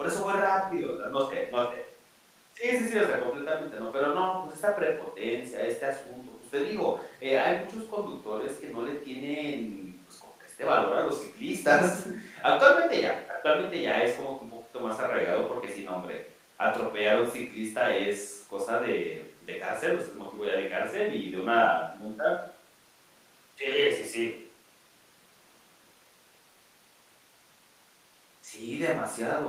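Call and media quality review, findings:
No audible faults found in the speech recording.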